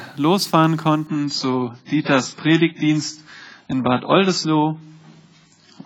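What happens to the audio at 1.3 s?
At 1.3 s you're inside a stretch of adaptive stream at a lower bitrate, running from 1.07 s to the end. The player switched down to a cheaper encode, which points to a drop from about 96 to 16 kbit/s AAC. Nothing survives above 7.7 kHz, so the top end goes dull and artefact-laden, and the change is sudden with no gap.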